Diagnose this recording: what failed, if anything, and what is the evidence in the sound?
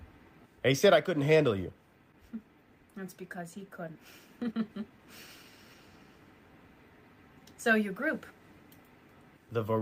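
The network or jitter buffer discarded a stretch of audio while later audio was already queued, so playback jumped forward. At 3.95 to 3.97 s the sound cuts straight into later material with no gap: a skip ahead of roughly 0.7 s.

The jitter buffer then held more audio than its target and shortened the backlog by repeatedly removing short pitch-period pieces. From 4.05 to 5.75 s this jitter buffer speed-up runs the sound at 115% speed with unchanged pitch, cutting about 0.3 s in total.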